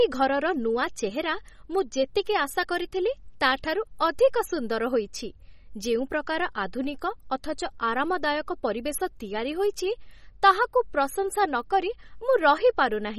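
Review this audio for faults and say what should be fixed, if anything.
MP3 compression, throughout: watery, swirling speech with nothing above 15.7 kHz, likely from a starved MP3 encode, around 32 kbps, dropping weak frequency lines frame to frame. Work from the original recording and, if MP3 delivery is needed, encode at a much higher bitrate.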